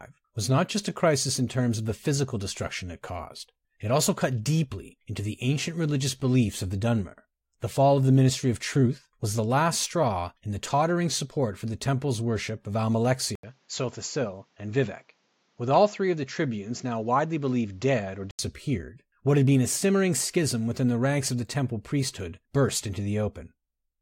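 An input switched to a poorer device, from 13.35 to 18.39 s, is the likely cause of the change heard here. After a brief gap of about 80 ms, the speech turns dull and boxy, with nothing above 7.6 kHz, drops roughly 5 dB in level, and sits over a new background noise roughly 40 dB down. A different microphone path with narrower bandwidth and its own gain would produce this. At 18.39 s the fuller sound returns.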